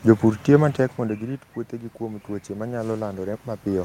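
Automatic gain rising starts at 0.97 s and continues to the end at 3.85 s. After the input level fell by about 16 dB, the gain control slowly pushed its gain back up, so the speech and the room noise swell together over several seconds.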